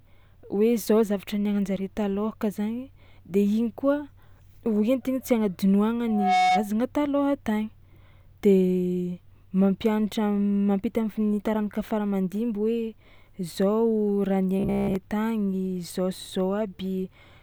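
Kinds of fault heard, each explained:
Loudspeaker feedback squeal: From 6.07 to 6.69 s a single 734 Hz tone swells over roughly a third of a second to about 5 dB above the speech. A microphone was picking up its own loudspeaker, and at that frequency the loop's gain exceeded one.
Robotic sound from repeated short buffers: From 14.60 to 14.96 s, just before "tagny zao", the speech turns into a stiff, metallic 66.7 Hz buzz. This is likely from audio arriving too late, with a 15 ms stretch looped over most of that span instead.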